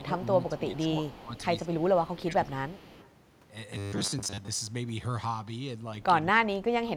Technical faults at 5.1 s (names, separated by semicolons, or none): none